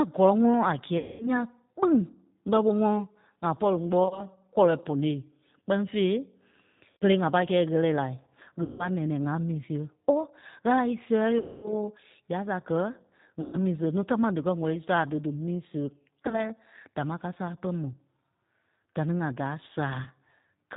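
The whole clip runs through the G.729 codec at 8 kbit/s. It rebuilds the speech from a vocal tract model and a few pulses per frame, and cuts everything above 4 kHz, so the speech sounds narrow, rough and plainly synthetic throughout.

VoIP packet loss concealed by the speech codec strikes at 0.98, 4.04 s (right after "ŋa pɔ̂ri"), 6.91 s (just before "ŋa pâi"), 8.63, 11.39, 13.41, 16.23 s (just before "dámaa káa sále") and 20.04 s. Each time, the decoder stretches its last frame into a fading buzzy tone or coloured noise, running to 240 ms at 11.39 s, and the speech stays weak briefly afterwards.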